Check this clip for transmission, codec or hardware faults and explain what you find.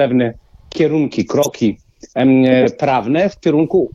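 Corrupt frames were decoded in two places, at 1.42 to 1.51 s, spanning roughly three frames, and at 2.62 to 2.65 s, about one frame. Flipped bits in the compressed data gave the decoder wrong gains or codes, which it played anyway, placing energy at wrong frequencies and producing a short chirp or noise burst. Unlike a dropout, which goes silent or gets smoothed over, each burst adds loud, unrelated sound. Unlike a click, it lasts a whole frame.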